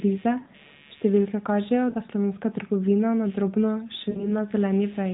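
Right from the start there's computer activity noise: a faint buzzy chirp pulsing at around 150 Hz, roughly 30 dB under the speech, where computer load is leaking into the audio ground. Then come lost AMR speech frames at 0.40 s (about 60 ms), 1.90 s (about 40 ms) and 4.10 s (about 60 ms). At each gap the narrowband decoder stretches the last good sound and fades it, giving a brief smeared warble before the voice comes back.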